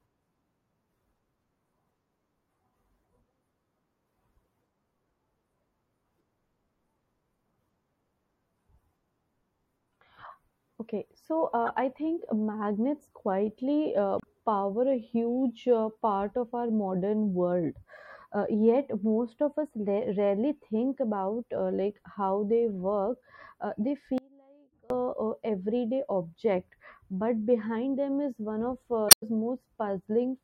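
The whole speech track sounds watery, with dull treble and swirling s sounds. That is likely MP3 compression at a low bitrate, something like 64 kbps. Damaged data in the compressed stream causes a short blip at 11.66 to 11.69 s, just before "I think magnets quietly". Another follows at 14.17 to 14.24 s, between "think magnets quietly uh" and "power a huge uh". In each case the decoder loses sync. From 24.18 to 24.90 s the speech cuts out abruptly for about 0.72 s, leaving only a faint trace far below normal level. This is likely an audio dropout with the path still live. A last corrupt-data blip comes at 29.08 to 29.23 s, after "is one of uh".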